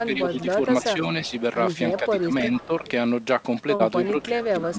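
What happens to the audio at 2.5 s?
At 2.5 s there is an echo leak, running from 1.97 to 2.91 s. A faint delayed copy of the speech trails it by 324 ms, about 20 dB below the main signal. The likely cause is a loudspeaker at the far end whose echo canceller let part of its microphone pickup slip back into the call.

In the same moment the speech is suppressed in double talk, from 2.0 to 2.84 s. The speech dips in pieces, at most by about 10 dB, adding up to roughly 0.4 s. Both sides were likely talking at once, so the canceller could not tell speech from echo and turned both down.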